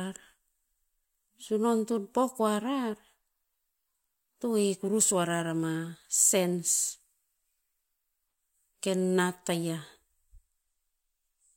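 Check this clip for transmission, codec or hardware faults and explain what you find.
No transmission, codec or hardware faults can be heard anywhere in this speech recording.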